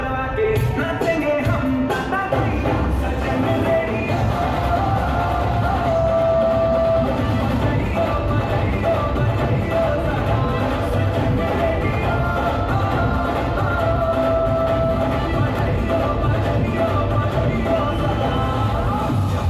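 No technical faults are audible.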